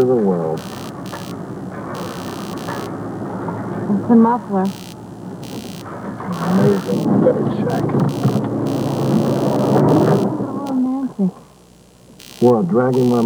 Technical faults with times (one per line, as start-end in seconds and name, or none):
0.00-13.26 computer activity noise